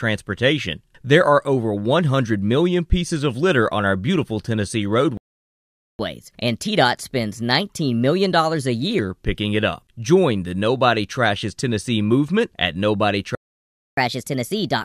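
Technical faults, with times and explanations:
5.17–5.99 s, playback stall: The speech cuts out mid-flow for about 0.82 s of silence. It then resumes where it stopped. The player likely ran dry of data or its thread was blocked.
5.99–8.99 s, catch-up at higher speed: From "picking it up", the speech runs 1.15 times fast. Pitch rises by roughly two semitones. The player is resampling its backlog to regain lost time, then settles back to normal.
13.35–13.97 s, playback stall: Right after "movement at", the sound drops out for about 0.62 s. Output stays silent until playback recovers.
13.97 s to the end, catch-up at higher speed: The speech returns 1.25 times fast, about four semitones high. The player is again racing through buffered audio to make up time.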